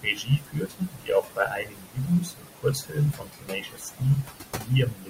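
Noise suppressor artifacts run through the whole of this speech recording: the suppressor pulls the background down by about 19 dB between phrases, then lets it back up under the talking. The room noise, sitting only about 8 dB below the speech, therefore pumps with the voice. Speech cut by the noise suppressor appears from 0.03 to 4.36 s and again from 4.57 s to the end. The suppressor mistakes quieter parts of the voice for noise and turns them down with the background, by as much as about 22 dB in the first span and about 20 dB in the second. Roughly three seconds of the first stretch and under half a second of the second are affected, leaving soft consonants and word endings sounding swallowed or faint.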